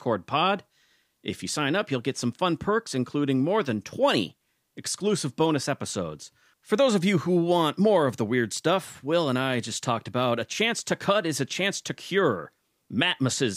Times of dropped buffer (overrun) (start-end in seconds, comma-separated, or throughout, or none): none